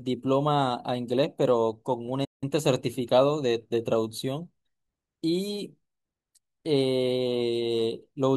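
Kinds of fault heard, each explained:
Playback stall: the speech drops to silence mid-flow at 2.24 s for 173 ms, then picks back up, likely the player briefly running dry or getting blocked.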